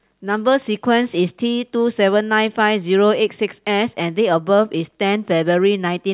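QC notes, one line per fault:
No fault found in this speech clip.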